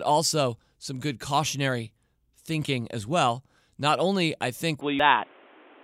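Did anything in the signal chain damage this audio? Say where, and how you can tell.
Yes. From 4.81 s to the end the speech abruptly turns dull and boxy, with nothing above 3.8 kHz, a level shift of about 5 dB and a new background noise roughly 30 dB below the speech. This most likely comes from the input being switched to a poorer device at the driver level. A codec's low-pass would not bring its own noise floor and level. This change arrives in one step, with no silence at the switch.

At 4.99 s there is a brief glitch in the speech, the sign of damaged data in a compressed stream. This sits at the codec or storage stage. The decoder hit corrupt bytes, misread the frame, and skipped forward to find the next valid header. A wiring or converter click would be a bare impulse with no lost audio.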